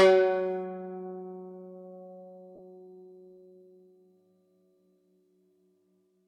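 At 2.55 to 2.60 s the music drops out briefly as lost LE Audio frames, about 37.5 ms, which fits five 7.5 ms frames. The LC3 decoder repeats the last spectrum with randomised signs, so sustained tones smear into brief noise before playback resumes, over light lossy compression.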